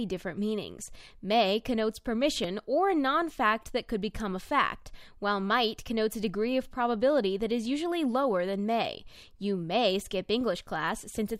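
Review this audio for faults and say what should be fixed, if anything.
At 2.44 s in this speech there is a small jump forward, likely a dropped buffer (overrun): roughly 10 ms of samples went uncollected and the edges were joined directly. The waveform shows an abrupt discontinuity and the spectrogram a thin vertical broadband line. Enlarging the input buffer or raising the capture thread's priority would prevent it.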